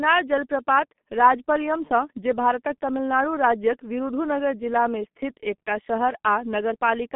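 G.723.1 codec damage runs through the whole speech clip, from start to finish. The sound has been squeezed through a very low-rate telephony coder, at a rate that fits roughly 6.3 kbit/s, working on long frames with a slowly updated model of the voice. The line band sits between about 150 Hz and 3.4 kHz, and nothing survives above 3.8 kHz, so the speech is heavily muffled and hoarse, with consonants smeared and indistinct.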